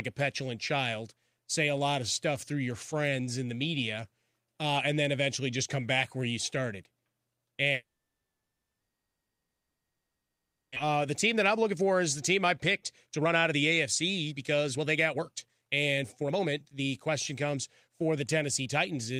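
At 7.73 s the speech breaks off into a brief fading buzz, then near-silence that lasts until 10.78 s, close to three seconds with nothing usable. When the talker returns, about 1.6 s of what was said is simply gone. This is a long network dropout: packets likely stopped arriving, the receiver briefly stretched the last sound before giving up, and the stalled stream built up well over a second of extra delay.

From 10.86 s to 13.72 s the speech sounds slightly rushed, running about 10% fast at unchanged pitch, and from 14.29 s to the end it turns noticeably hurried, at about 21% fast. This is jitter buffer speed-up: after the backlog arrived, the receiver trimmed many short pitch-period-sized slices to drain the excess delay, removing roughly 0.3 s in the first stretch and around a second in the second.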